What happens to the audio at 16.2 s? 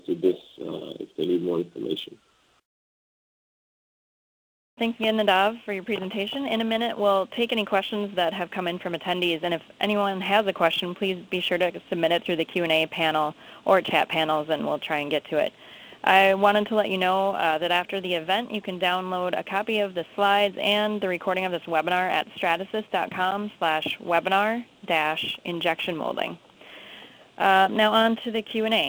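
Sample clock jitter is present at 16.2 s, as throughout: an unsteady converter clock mistimes samples by a few microseconds, adding hiss roughly 30 dB below loud, bright passages.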